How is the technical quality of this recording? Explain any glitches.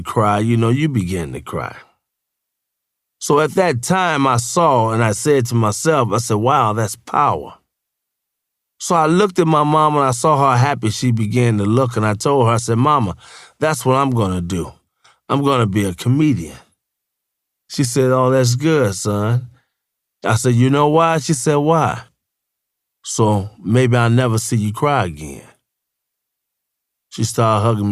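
No glitches can be heard anywhere in the speech recording; the signal stays steady and intact throughout, without dropouts, clicks, distortion or other technical disturbances.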